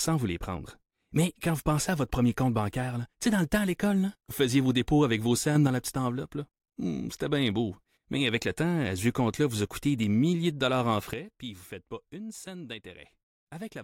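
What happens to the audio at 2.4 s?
Nothing goes wrong at 2.4 s; the speech carries on intact through that moment with no audible fault.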